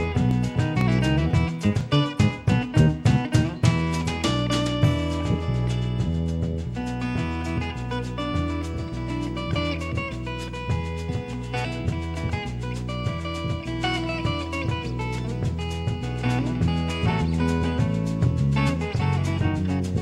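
From 0.31 to 2.31 s, periodic USB or driver dropouts skip roughly a millisecond every 0.5 s: regular ticks, waveform discontinuities, thin vertical spectrogram lines.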